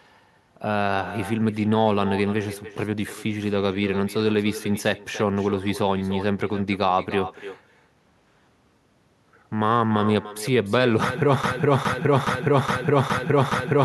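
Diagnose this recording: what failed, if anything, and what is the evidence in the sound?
Echo with no canceller at the call-processing stage: throughout the speech, a thinner copy about 13 dB down trails each phrase by roughly a third of a second. That discrete delay separates it from room reverberation.

Broken-record loop, likely a stalled player, encoder or stream: from 11.44 s to the end, one 416 ms fragment repeats six times, identically and back to back, unlike varied jitter stutter.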